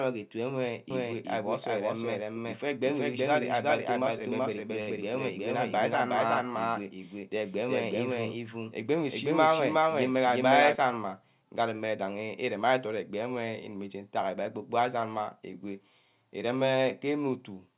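From 0.91 s to 10.75 s the speech is heard twice. A second full-band copy trails about 400 ms behind, at roughly the same level. It has no room colour and starts and stops abruptly. This is a doubled audio track, likely from a second, slower capture path or a misaligned edit.

From 4.81 s to 4.90 s there is a short stall from a late packet. The jitter buffer ran empty, so the receiver held the last sound for 66 ms until the packet arrived. Nothing is lost. That sound lingers with a slight buzz or dip, and everything after it runs 66 ms later, all within the G.711 call path's band, which stops at 4 kHz.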